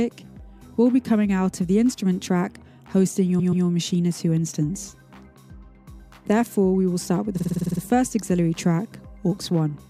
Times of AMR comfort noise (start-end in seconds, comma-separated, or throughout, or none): none